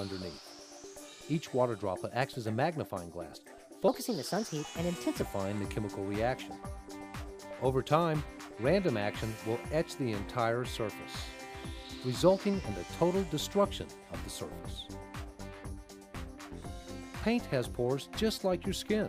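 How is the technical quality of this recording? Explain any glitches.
One glitch stands out. A section at the wrong speed runs from 3.88 to 5.22 s, where the audio plays 1.24 times too fast, likely because that stretch was fitted to the wrong clock. Pace and pitch jump together, about four semitones higher, then drop back.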